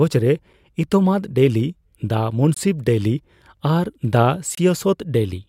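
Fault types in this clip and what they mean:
Gap between stream segments: hard-edged silences of about 22 ms and 26 ms, at 2.54–2.57 s and 4.55–4.58 s, two seconds apart, matching a 2-second segment length. Unlike a dropout, nothing is missing, and the sound resumes exactly where it stopped.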